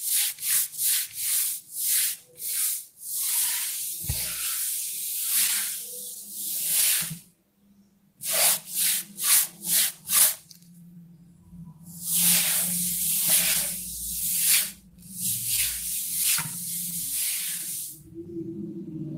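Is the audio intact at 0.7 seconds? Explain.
No. Between 0.09 and 1.46 s, scattered short gaps occur: a few packets were lost or arrived late, one at a time, and the receiver covered each hole by extending the sound that came just before it. Only about 30 ms in total is patched, with no gap much longer than 10 ms. The sound stays clear but carries brief ticks and small smears, and the moment at 0.7 s falls inside that patched stretch.

Clock drift between sender and receiver runs through the whole clip as well, so it also affects 0.7 s. The sender's clock is roughly 1.5% slower than the receiver's, which means the jitter buffer keeps draining. The receiver has to repeat short slices of sound to keep the buffer from running empty. This produces small timing hiccups at irregular intervals.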